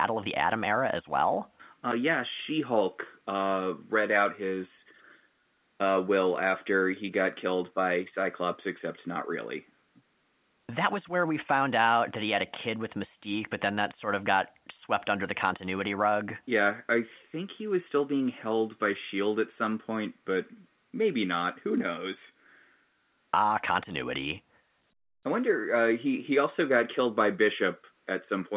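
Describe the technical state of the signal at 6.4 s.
At 6.4 s the speech comes through intact, carried normally by the A-law telephone coding with its usual narrowband character and nothing out of place.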